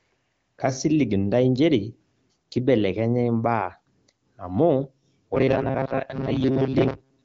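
From 5.36 s to the end, incoming audio likely stops arriving in time, so playback keeps looping a tiny stretch of about 7.5 ms while the real signal is skipped. This is robotic sound from repeated short buffers. Roughly two thirds or more of that stretch is repeated material, and the looping imposes a fixed 134 Hz buzz, so the speech turns rigid and metallic while loosely tracking its contour. Throughout, the AMR-WB coding leaves nothing above about 7.2 kHz.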